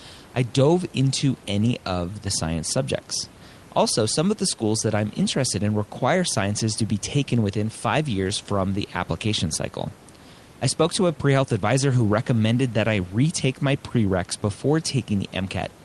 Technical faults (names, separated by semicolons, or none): none